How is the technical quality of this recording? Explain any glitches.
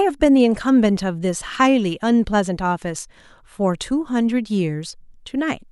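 No glitches or technical faults can be heard here.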